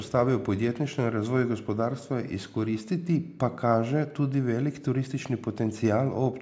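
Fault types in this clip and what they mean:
No technical faults can be heard in this speech clip. It has been through call microphone processing, which leaves nothing above 8 kHz and removes the lowest bass.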